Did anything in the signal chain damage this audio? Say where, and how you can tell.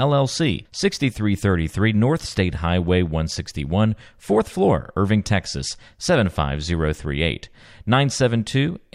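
No, nothing along the way seems to have harmed this speech, and I can't hear anything that points to trouble at any stage of the chain.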